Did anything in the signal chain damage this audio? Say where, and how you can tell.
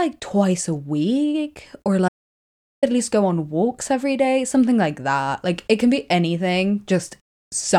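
Yes. After "twice a week or", at 2.09 s, the speech cuts off abruptly into total silence, with no room tone or hiss, until it resumes at 2.83 s with "at least go on", about 0.74 s later. This is an audio dropout to silence. The silent gap points to the input stage: the source device, its link or a mute likely dropped out while the recorder kept writing silence, so that stretch of speech is simply gone.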